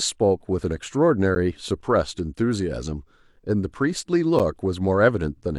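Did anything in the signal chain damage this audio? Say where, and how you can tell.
Yes. The damage comes at segmented-stream playback: a gap between stream segments recurs about once per second, at 1.35, 2.38, 3.36 and 4.39 s, lasting 10.4, 3.2, 6.2 and 8.7 ms. The timestamps of adjacent 1-second segments don't quite meet, so the player fills the space with silence. The speech cuts out abruptly and resumes with nothing lost. A waveform shows each gap as a flat silent run with sharp edges. A spectrogram shows a thin, blank vertical stripe.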